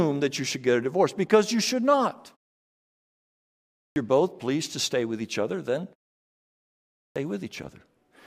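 Speech that twice comes back abruptly out of silence with its onset missing, a clipped start after a pause. After a 1.52 s gap, about 160 ms is swallowed from 3.80 to 3.96 s, so "both pleased to stay" begins already underway. After a 1.13 s gap, about 158 ms goes missing from 7.00 to 7.16 s. The output device drops into sleep during the quiet stretches and needs that long to wake before it passes sound again.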